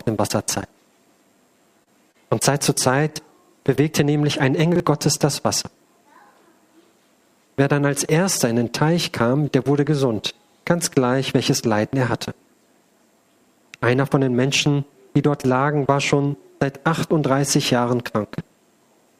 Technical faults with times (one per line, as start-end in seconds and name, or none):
1.83-2.16 short concealed packet loss
4.72-4.80 chunks out of order